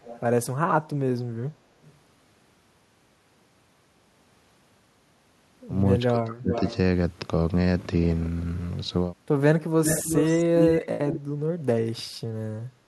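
A speech recording in which faint delayed repeats of the talking trail the original, first at 0.02–0.2 s and 1.82–1.98 s, lagging by 244 ms and sitting well below the main level, very quietly in the second case. Later the lag lengthens to 367 ms, at 6.52–6.74 s, 9.84–10.87 s and 11.09–11.2 s, and the repeats grow louder, reaching roughly the same level as the speech in the long stretch near 10 s. This is likely echo leak, where the far end's loudspeaker output reaches its microphone, the echo canceller fails to remove it, and the residue returns down the line. From 6.14 to 6.52 s the speech itself sinks sharply, dropping by as much as about 35 dB over roughly 0.4 s before recovering. The likely cause is speech suppressed in double talk: with both sides talking at once, the echo canceller could not tell the local talker from the loudspeaker echo and attenuated everything it heard.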